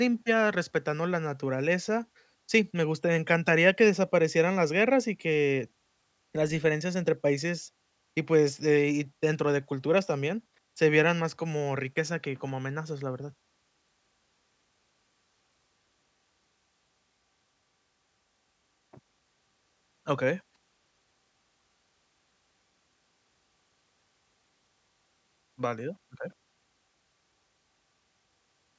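No technical faults can be heard at any point in the speech. There is nothing to place on a timeline here.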